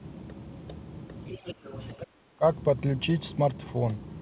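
A speech recording carried over a narrowband call line, with nothing above 4 kHz, which fits a 64 kbps G.711-style telephone codec. From 1.25 to 2.06 s the other side's voice leaks through faintly, at about 15 dB below the talker, most likely because the far end's loudspeaker output reached the microphone and the echo canceller left a residue. Overlapping that stretch, the talker's speech is suppressed in double talk twice: from 1.39 to 1.69 s it sinks by up to about 15 dB, and from 1.96 to 2.43 s by up to about 20 dB. Roughly a fifth and then about four tenths of a second of speech are pulled down. These dips coincide with the leaked voice, pointing to a canceller that could not separate the two sides and attenuated both.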